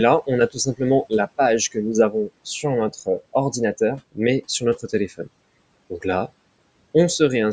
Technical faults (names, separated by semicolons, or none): speech cut by the noise suppressor